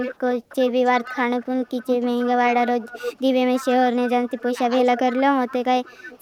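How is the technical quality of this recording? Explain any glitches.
Quality is compromised by echo problems across much of the speech. Echo leak shows up from 0 to 2.29 s, 2.8 to 3.22 s, 3.55 to 3.75 s, 4.24 to 4.43 s and 4.81 s to the end. There's a copy trailing about 308 ms behind, roughly 10 to 25 dB down, likely from a far-end echo canceller not fully cleaning its loudspeaker pickup. Speech suppressed in double talk hits 4.45 to 4.59 s and 5.61 to 6.2 s. The voice dips about 10, then about 20 dB, likely because the canceller ducked everything during overlap.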